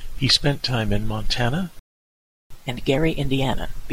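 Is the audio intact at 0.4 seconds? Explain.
Yes, the audio at 0.4 seconds is intact, with no dropout, click, distortion or other fault at that moment.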